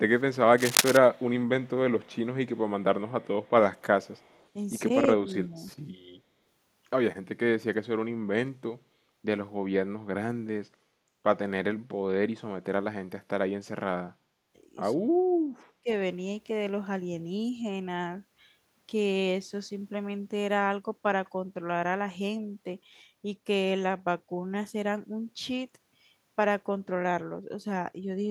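A faint echo leak starts at 0.16 s: a distinct copy of the speech trailing by 292 ms, about 35 to 40 dB down. This is likely an echo canceller failing to remove the loudspeaker pickup. A fixed-delay repeat like this is not room reverberation. From 0.58 to 0.97 s, cable scratch noise adds dense, uneven rustling at roughly the speech's own level. It is unrelated to the speech's rhythm, unlike clipping crackle, and likely comes from a worn contact being moved. The echo leak returns at 1.13 to 1.7 s, 2.02 to 2.17 s, 2.56 to 2.6 s and 3.08 to 4.48 s. Speech suppressed in double talk follows: a modest dip of roughly 10 dB at 5.44 to 5.56 s and a deep cut of roughly 30 dB at 15.43 to 15.87 s. These are likely caused by the canceller ducking while both sides talked. They are brief.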